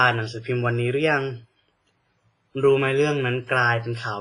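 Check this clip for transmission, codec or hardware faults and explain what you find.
One fault runs through the whole speech clip. Throughout, likely WMA compression at a low bitrate, around 24 kbps, using long transform blocks that zero weak lines and smear quantisation noise. The sound rings and turns washy, with a breathing hiss and nothing above 10.4 kHz.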